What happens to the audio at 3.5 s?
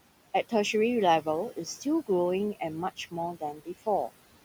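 Between 3.36 and 3.68 s, speech cut by the noise suppressor occurs. The suppressor mistakes parts of the speech for noise and turns them down by up to about 15 dB, so around 150 ms of that stretch sounds swallowed and faint. Noise suppressor artifacts are also present: the room noise sits about 17 dB below the speech and is pulled down by about 17 dB between sounds, then rises again under the words.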